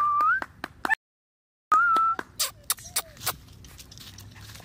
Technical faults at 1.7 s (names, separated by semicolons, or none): audio dropout to silence